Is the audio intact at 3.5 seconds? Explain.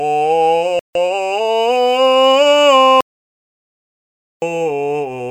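No. An audio dropout to silence runs from 3.01 to 4.42 s: the music cuts to silence for 1.41 s, likely from lost input while recording continued.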